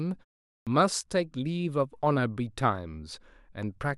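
At 0.55 s there is a clipped start after a pause: the output device had dropped into an idle state during the roughly 0.39 s of silence before it and needed time to wake and lock again. As a result, about 117 ms of speech, running to 0.67 s, never reaches the output. The next utterance begins abruptly out of silence with its first sounds cut away, so it lands hard and slightly truncated.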